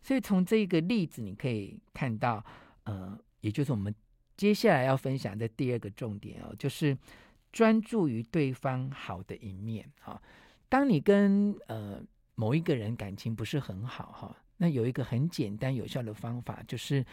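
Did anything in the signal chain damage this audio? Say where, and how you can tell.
No, nothing along the chain seems to have harmed this speech, so there's no stage to point to and nothing to chase down.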